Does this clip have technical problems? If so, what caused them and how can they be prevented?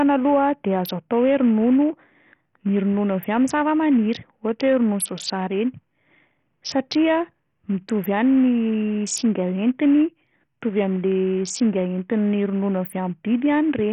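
Yes: the speech runs throughout through what is likely Bluetooth SBC compression at a starved bitrate, leaving gritty, flickering treble with nothing above 16.9 kHz. Prevent it with a wired connection or a higher-quality Bluetooth codec.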